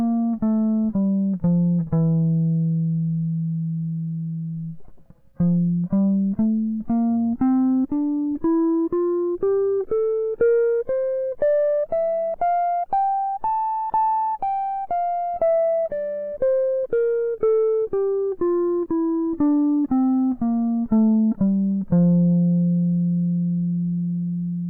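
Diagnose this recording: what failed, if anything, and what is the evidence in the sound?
Nothing failed in this recording.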